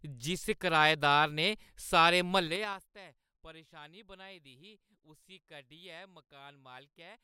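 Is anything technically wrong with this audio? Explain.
Yes. From 2.39 to 2.90 s, just after "जिस कराएदार ने सारे" and before "परेशानी बनाई दी", the gain drops by roughly 25 dB in unsmoothed 4 dB steps, around ten a second. This is zipper noise: each abrupt jump leaves a small click, so a ticking zip rides on the speech during the fade.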